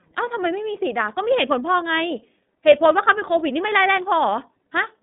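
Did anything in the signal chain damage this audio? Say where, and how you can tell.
Yes. iLBC codec damage runs throughout, from the start of the speech to its end, at the codec stage. Nothing survives above 3.8 kHz, and the band sits at roughly 200 Hz to 3.7 kHz, a narrowband telephone line. The speech has a plainly audible rough, synthetic grain. Each 30 ms frame's excitation is coded on its own, without reference to the previous frame, which fits iLBC's 13.33 kbps mode.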